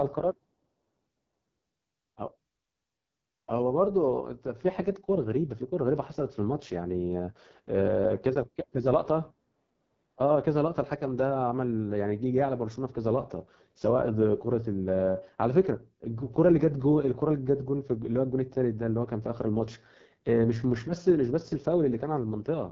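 From start to finish, the speech carries heavy damage from the AMR wideband (HD Voice) codec. Nothing reaches above about 7.5 kHz. The codec rebuilds speech from a pulse-driven model of the vocal tract, and the top band is only shaped noise. Here the coding is starved of bits. The sound is rough and raspy throughout. That fits the codec's lowest rate, around 6.6 kbit/s.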